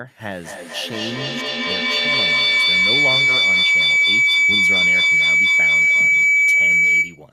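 Speech is overtaken by feedback howl from 0.44 s to the end, a tone around 2 kHz with the loop repeating roughly every fifth of a second and peaking about 13 dB above the voice. Unlike an echo, whose repeats fade, this mic-to-speaker loop gains level each trip.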